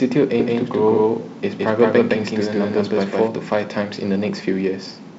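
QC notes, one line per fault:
0.40–3.28 s, doubled audio track: a second full-band copy of the speech trails the original by around 150 ms at about the same level, starting and stopping abruptly with no decay or room colour, most likely from a second, slower capture path mixed back in.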